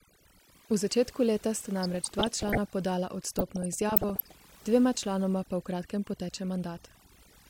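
Overdone noise removal runs through the whole speech clip. The reduction is set so strong that any frequency band near the estimated noise floor gets pulled down or cut, taking quiet parts of the voice with it. Pauses drop to near silence with twinkling specks.

DAB burbling appears from 1.76 to 2.58 s and again from 3.38 to 4.37 s. Weak reception lets bit errors, at a rate suggesting a few tenths of a percent, slip past error correction. Corrupted samples put short blips of noise in single sub-bands, and corrupted scale factors make sub-bands jump in level for up to a frame, giving burbling over the voice.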